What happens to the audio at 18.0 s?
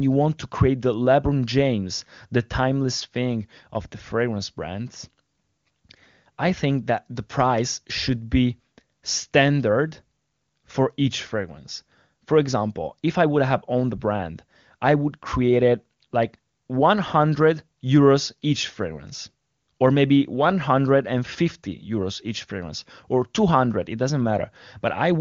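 Nothing goes wrong at 18.0 s; the speech is intact there, carried clearly through the AMR wideband (HD Voice) codec at a rate high enough to keep it free of the raspy roughness the lowest modes bring.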